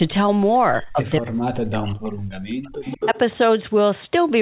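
An echo leak first shows up at 0.76 to 0.86 s as a faint delayed copy of the speech, about 30 dB below it and trailing by about 0.19 s. The likely cause is a far end playing the call over a loudspeaker whose echo canceller let part of the microphone pickup slip through and sent it back. The narrow, telephone-band quality of the whole clip, with nothing above 4 kHz, carries into the echo as well.

Speech suppressed in double talk follows from 0.93 to 1.97 s. For roughly a second the speech sinks and breaks up in pieces, falling by as much as about 40 dB at its deepest. This is most likely the echo canceller failing to tell the local talker from loudspeaker echo while both sides were active, so it turned everything down together.

The echo leak returns twice, with the same 0.19 s lag. At 1.9 to 2.18 s it overlaps the tail of the suppressed stretch, about 25 dB down. At 2.63 to 3.18 s it is far stronger, only about 5 dB below the direct speech. 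At that level the delayed copy doubles the sound and smears it over half a second.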